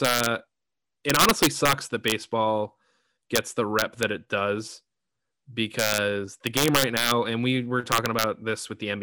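Integer overflow cracks the speech at 0.05–0.26, 1.10–1.73, 2.08–2.12, 3.36–3.38, 3.79–4.03 (just before "it does"), 5.79–5.98, 6.47–7.11 (before "and we were") and 7.92–8.24 s (after "and we were"). Loud peaks, pushed about 1 to 5 dB past the limit, wrap to the opposite sign instead of clamping, giving violent cracks far harsher than clipping.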